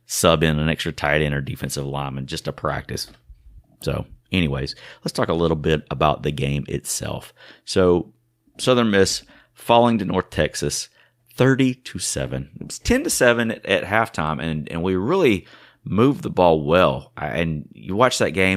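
No technical faults are audible.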